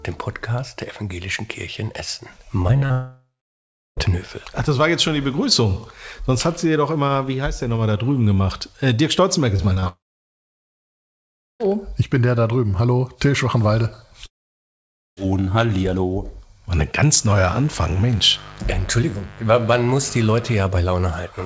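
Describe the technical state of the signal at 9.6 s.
At 9.6 s the signal is inside a burst of repeated packet loss (robotic sound), running from 9.57 to 9.88 s. Five short holes, none longer than 20 ms, are each patched by extending the preceding sound. About 30% of the stretch is concealed, giving a choppy texture with pieces missing.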